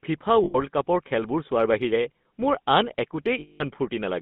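The GSM full-rate codec colours the whole clip. It models the vocal tract and excites it with a sparse, regularly spaced pulse train, consistent with the 13 kbps coder, leaving speech plainly buzzy and gravelly, confined to roughly 150 Hz to 3.6 kHz.

Lost GSM frames break in from 0.44 to 0.56 s and again from 3.40 to 3.72 s. The decoder repeats the last good frame's parameters, so the sound freezes into a rough, metallic ring. The longer gap, which fits about ten lost frames, covers about 0.2 s of lost audio.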